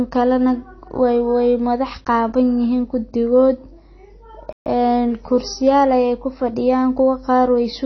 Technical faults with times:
0.00-7.86 AAC compression
4.53-4.66 playback stall

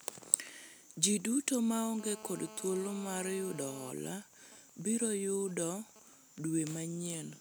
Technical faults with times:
2.00-3.91 GSM phone buzz
3.97-6.14 GSM signalling bursts

